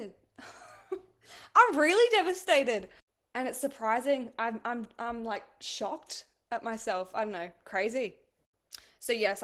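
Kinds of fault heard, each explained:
Opus voice compression: The speech passed through an Opus encoder in hybrid mode, with the linear-prediction SILK layer carrying the band below 8 kHz and a CELT layer adding the upper band in 20 ms frames. Starved of bits, which fits a rate near 16 kbps, the excitation is coded coarsely, so throughout the clip the voice is plainly degraded: hoarse and slightly robotic.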